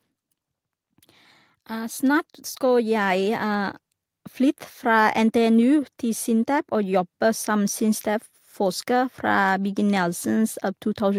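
From 1.67 to 3.83 s, automatic gain rising: the gain control judged the input too quiet and gradually pushed its gain up by about 7 dB. The speech and the background noise swell together across those two seconds, growing louder as one.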